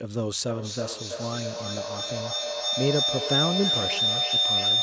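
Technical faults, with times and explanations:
0.47–4.82 s, feedback howl: a tone near 4 kHz swells, repeating about every 0.3 s and peaking about 3 dB above the speech, as the microphone-to-loudspeaker loop keeps gaining level.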